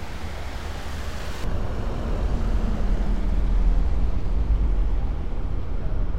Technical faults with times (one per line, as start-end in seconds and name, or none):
1.44-6.18 de-emphasis applied wrongly